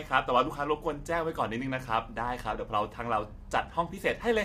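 From the first moment to the end, the speech has a rough, grainy texture, with a hiss filling the gaps between the harmonics and a top end that sounds thinned out and artificial. That's the sound of low-delay AAC compression, likely AAC-ELD at a bitrate that fits roughly 32 kbps. Its short frames can't resolve the pitch harmonics finely, and at this low bitrate the bits run short, so the damage is plainly audible.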